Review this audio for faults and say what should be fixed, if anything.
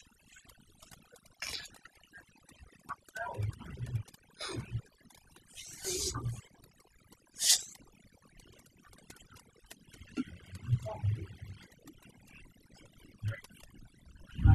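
Overdone noise removal runs through the whole clip: the reduction pulls individual frequency bands down whenever they sit near its noise estimate, so gaps turn to near silence with twinkling specks. A noise gate would instead cut the whole signal at once. Back off the reduction strength and threshold so quieter parts of the voice survive, or re-record in a quieter space.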